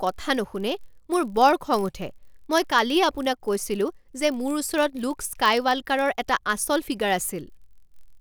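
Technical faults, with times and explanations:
throughout: block size mismatch (padded). A steady 43.1 Hz buzz runs under the speech, which fits a 1024-sample read block being topped up with a brief run of zeros each time. The padding is tiny, so playback runs at 0.999 speed and pitch sounds unchanged.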